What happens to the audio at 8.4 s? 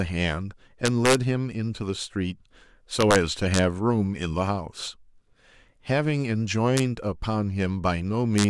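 Right near the end, from about 8.38 to 8.44 s, the speech hits integer overflow: peaks that only just reach the top of the integer range wrap around to the opposite sign instead of being held there, so you get a short, violent crack, far sharper than ordinary clipping.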